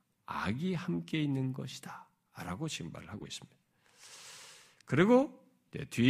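A speech clip with a brief chirp-like burst of noise from 3.18 to 3.28 s, fairly quiet at around -35 dBFS. It is a corrupt frame decoded: a few compressed frames carried flipped bits, and the decoder played them anyway, putting energy at wrong frequencies.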